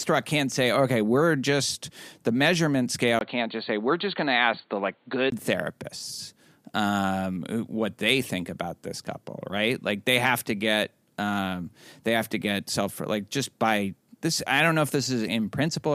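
After "we're just the measurement", at 3.19 s, a short silence of about 20 ms leads into duller, boxier speech with nothing above 4.5 kHz and a faint new noise floor at an unchanged level, until 5.32 s before "therapists um what they". This is likely an input switched to a poorer device. The gap and changed background set it apart from a plain bandwidth drop.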